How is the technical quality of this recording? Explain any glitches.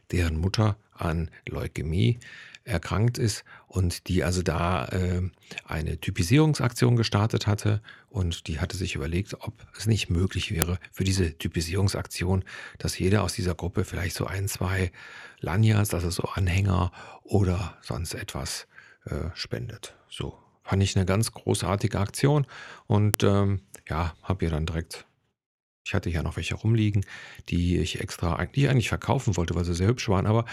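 The speech has two brief glitches, at 10.62 s and 23.14 s. Both are a file header played as audio. Separate WAV pieces were joined without stripping their headers. Those few dozen header bytes play as samples. Each join produces a sharp, loud click.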